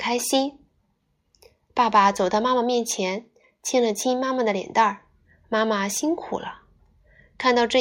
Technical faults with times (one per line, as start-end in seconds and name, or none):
none